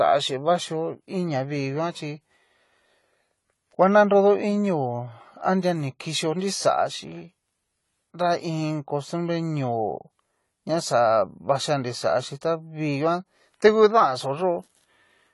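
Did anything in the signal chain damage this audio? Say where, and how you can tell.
Yes. AAC compression runs through the whole clip and damages it at the codec stage. The speech sounds dull and smeared, with a fizzy, warbling texture on sibilants and sustained sounds. A coder this short of bits likely lowered its cut-off to save data and then quantised the remaining spectrum so coarsely that bands turned patchy or noise-filled. The damage fits AAC-LC at a low bitrate of around 32 kbps.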